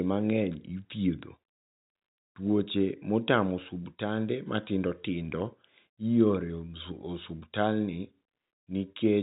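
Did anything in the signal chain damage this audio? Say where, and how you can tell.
No, nothing along the chain has damaged this speech. The G.711 telephone coding works as it should: the band stops at about 3.8 kHz, with at most a faint quantisation hiss riding on the speech level.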